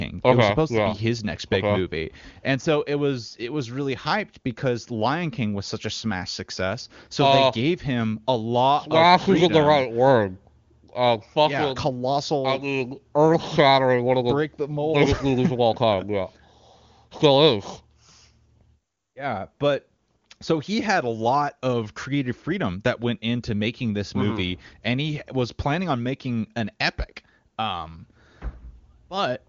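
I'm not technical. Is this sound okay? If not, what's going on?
Yes, nothing is wrong: this is phone-line HD Voice (AMR wideband) audio, so the sound simply tops out at about 7.2 kHz, which is normal for that system.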